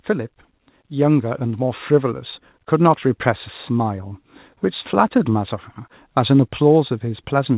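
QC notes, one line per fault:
0.90 to 2.35 s, automatic gain rising: over about 1.5 s the level climbs by about 5 dB, and the voice and the background noise swell together rather than the voice alone getting louder. That points to the automatic gain control judging the input too quiet and raising its gain step by step, so everything it passes is lifted at once. The band stays capped at 4 kHz, consistent with a narrowband G.711 call path.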